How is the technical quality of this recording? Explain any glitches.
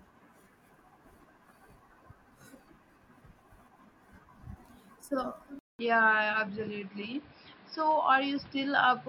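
The recording has one clear fault. At 5.59 s, after a 0.2 s gap, the speech turns dull and boxy with nothing above 5.4 kHz and new background noise, at roughly unchanged loudness, through to the end. Likely an input switched to a poorer device.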